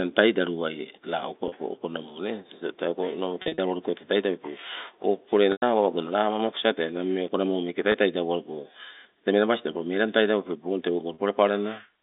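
Packet loss with pitch repetition occurs at 1.48–1.52, 3.42–3.58 (scattered), 5.52–5.62, 7.92–7.94 and 11.14–11.18 s. Lost packets were bridged by repeating the last pitch period, so the gaps of 20 to 40 ms sound like a briefly held, buzzy tone within the 250–3700 Hz telephone band, while the 100 ms gap at 5.52 s fades into silence and speech returns with a short cross-fade.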